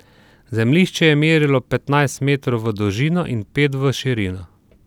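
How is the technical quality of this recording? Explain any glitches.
Nothing in the recording stood out as a technical problem on listening, so there are no glitches to explain.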